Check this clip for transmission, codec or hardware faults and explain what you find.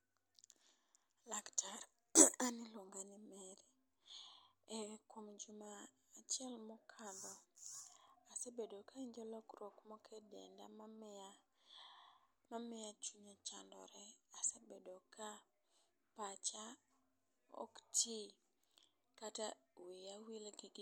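No faults are audible anywhere in the speech.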